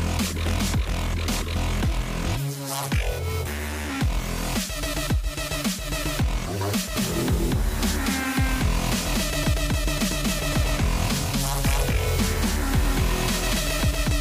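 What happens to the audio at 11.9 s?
At 11.9 s every sound is heard twice: a second, equally loud, dry full-band copy trails the first by around 200 ms. This doubled audio track starts abruptly at 6.96 s and runs to the end, likely from the same audio being captured again through a slower path.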